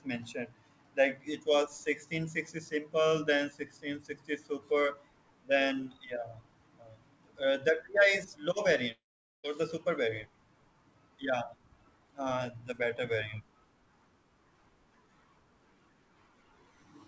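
Speech recorded through a call path whose audio stops at 8 kHz, which fits a G.722 codec, has one long network dropout, likely a run of lost packets, from 8.92 to 9.45 s. After "is low" the receiver stretches the last sound into a fading buzz that sinks to near-silence, and speech resumes at "the super variant" with about half a second gone.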